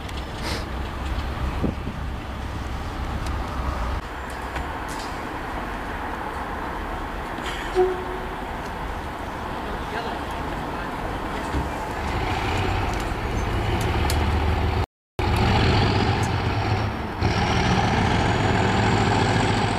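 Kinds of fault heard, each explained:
Playback stall: the player likely ran short of data or was blocked, so the sound drops to silence for 0.35 s from 14.84 s.
Time-compressed catch-up: the player clears its backlog by cutting and cross-fading slices, so from 15.19 to 18.19 s the sound hurries at 1.1x, same pitch.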